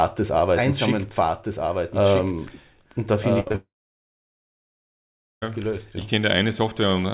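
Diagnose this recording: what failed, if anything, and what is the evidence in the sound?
A doubled audio track, likely from the capture or edit stage, repeats the speech about one and a half seconds later and about 5 dB quieter. On a spectrogram, the same full-band patterns appear twice.

At the network stage, a burst of packet loss from 3.40 to 3.48 s leaves 60 ms filled by a fading continuation of the last sound. The waveform shows a smooth decaying tail in place of the speech.

Two short concealed packet losses, at 3.48 to 3.52 s and 3.52 to 3.56 s, each replace about 20 ms with synthesized continuation. They are heard as a brief smear and appear as a blurred strip on the spectrogram.

A long network dropout runs from 3.56 to 5.44 s, likely a stall in arrival. Most of it, about 1.74 s, is silence, visible as a flat waveform and an empty spectrogram. The speech then resumes further on, without the lost part.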